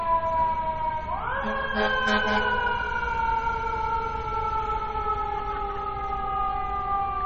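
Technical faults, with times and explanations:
Throughout: MP3 compression. Nothing is present above 7.9 kHz, and the remaining audio has a plainly audible watery, swirling quality. This is likely MP3 encoding at a very low bitrate, consistent with about 32 kbps. With so few bits, the encoder discards the treble above a fixed cut-off and zeroes weak frequency lines. Because those lines switch on and off from frame to frame, the retained band shimmers and loses detail.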